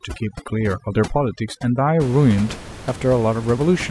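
From 0.0 to 2.0 s, overdone noise removal gates bands near the noise floor, breaking the background into twinkling specks; a spectrogram shows scattered isolated time-frequency dots, while room noise sits about 14 dB below.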